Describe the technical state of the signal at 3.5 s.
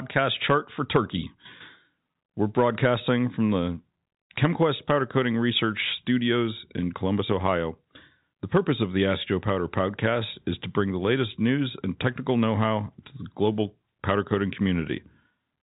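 At 3.5 s the audio is intact, with only the band-limited sound of G.711 telephone coding, where nothing above about 3.8 kHz comes through.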